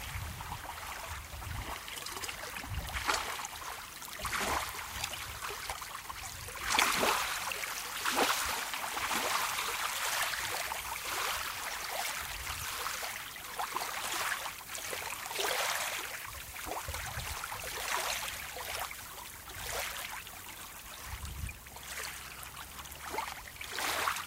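Nothing goes wrong with these sounds at any point, so there's no technical fault to point out anywhere in the recording.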